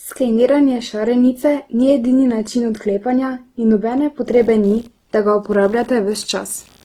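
From the start, the speech sounds rough and grainy, with a noisy, sandpapery texture on its tones. This is likely Opus compression in its music mode at a low bitrate around 16 kbps, filling starved bands with folded or noise content. On a spectrogram, energy extends to about 20.2 kHz with few holes, but the harmonics look smeared and speckled.

From 4.32 s, right after "način odklepanja in nobene", computer activity noise appears and continues to the end. A buzzy, scratchy pulsing near 70 Hz, about 35 dB below the speech, comes from processor or graphics load disturbing the audio ground. A spectrogram shows faint noise with regular vertical striations that ignore the speech.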